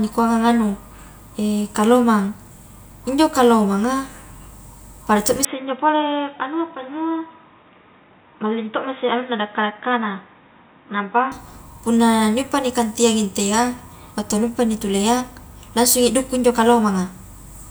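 After "pada to mi", 5.45–11.32 s, speech dulls and quietens, likely an input switched to a poorer device; the spectrogram shows nothing above 3.8 kHz.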